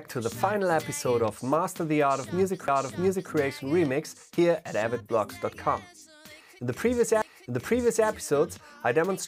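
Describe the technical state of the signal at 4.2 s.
At 4.2 s the signal is intact, with no audible fault at that point.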